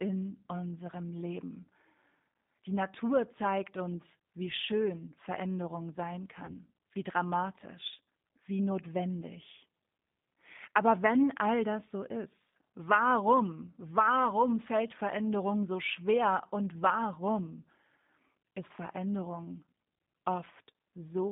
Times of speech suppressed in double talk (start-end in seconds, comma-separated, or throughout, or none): none